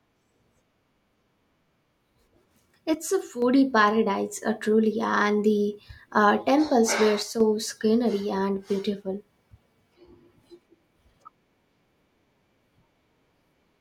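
From 2.94 to 3.42 s the speech drops abruptly by about 6 dB, then returns just before "paradise uh truly and". The same step recurs from 7.23 to 7.40 s, after "the uh temples were" and before "scenery and beautiful". The likely cause is one channel dropping out: with one stereo channel missing, the mono sum keeps only half the shared signal, so the level falls by about 6 dB and any content unique to that channel vanishes.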